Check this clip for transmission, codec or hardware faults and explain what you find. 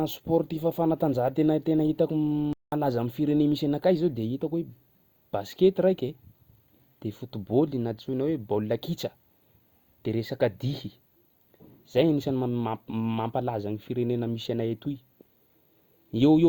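One fault stands out: a playback stall from 2.53 to 2.72 s, where the speech stops in mid-flow and the output falls completely silent for about 192 ms before the sound resumes. The gap is too abrupt and clean to be a natural pause. It is likely that the player briefly ran short of buffered data, or its output thread was held up, so nothing reached the output until it recovered and carried on.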